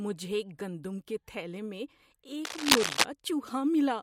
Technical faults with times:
2.45-3.04 cable scratch noise

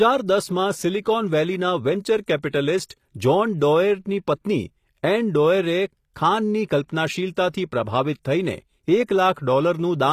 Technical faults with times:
0.00-10.12 HE-AAC compression
2.42-2.53 pre-echo

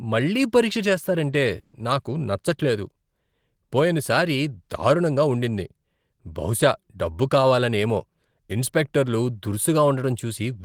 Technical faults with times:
1.59-1.75 burst of packet loss

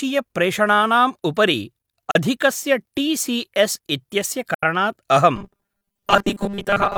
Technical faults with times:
2.11-2.16 AAC frame loss with muting
4.54-4.64 AAC frame loss with muting
5.36-6.97 robotic sound from repeated short buffers

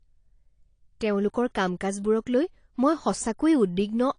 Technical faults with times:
0.00-4.18 AAC compression

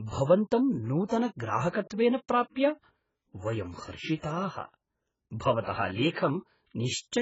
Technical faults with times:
0.00-7.21 AAC compression
1.06-1.10 pre-echo
6.11-6.16 pre-echo

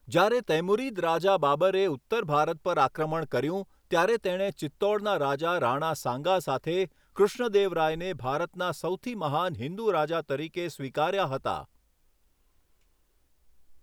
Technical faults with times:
none

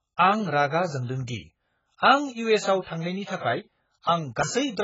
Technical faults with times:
0.00-4.83 AAC compression

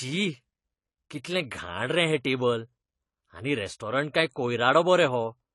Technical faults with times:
0.00-5.54 AAC compression

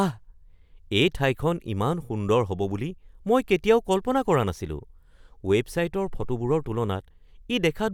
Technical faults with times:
none

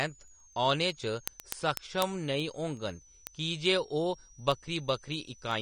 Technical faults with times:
0.00-5.62 switching supply whistle
0.00-5.62 AAC compression
0.15-5.51 word clock ticks

